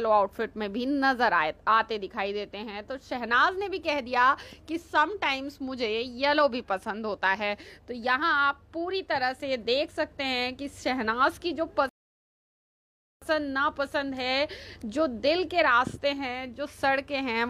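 At 11.89 s the audio drops to silence until 13.22 s, a rebuffering stall: playback exhausted its downloaded data and halted until more arrived. When sound returns it continues exactly where it stopped, so nothing is missing, but about 1.3 s of dead air is inserted.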